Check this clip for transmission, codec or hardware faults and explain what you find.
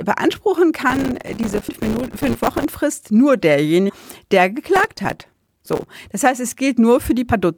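Two kinds of fault are present in this speech clip.

From 0.9 to 2.64 s and from 4.76 to 5.87 s there is processor overload crackle. The processor misses many short buffer deadlines in a row, each of roughly 3 ms, and each miss leaves a tiny silent gap. The result is a sustained gritty tearing, not an isolated click.

At 1.67 s, from 3.88 to 3.90 s, and at 7.32 s there is damaged data in a compressed stream. Each time, the decoder misreads corrupted frames and then resyncs, producing a brief chirp, click or short hole, unlike the dense crackle of the overload.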